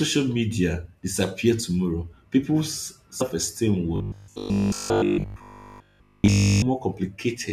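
At 3.20 s compressed frames are skipped: about a tenth of a second of speech vanishes as the audio jumps ahead. From 3.96 to 6.64 s the speech becomes a rigid, metallic 50 Hz buzz, likely robotic sound from repeated short buffers, which fits a 20 ms buffer replaying with almost no fresh audio, unlike ordinary codec warble.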